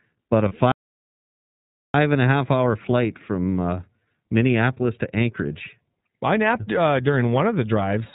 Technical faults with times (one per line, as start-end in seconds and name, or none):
0.00-8.14 iLBC codec
0.48-0.52 lost iLBC frames
0.72-1.94 playback stall